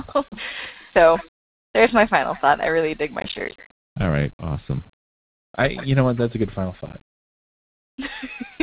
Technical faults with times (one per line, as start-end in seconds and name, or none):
1.38-1.74 comfort noise in place of the background
3.20-3.74 processor overload crackle
6.86-7.18 processor overload crackle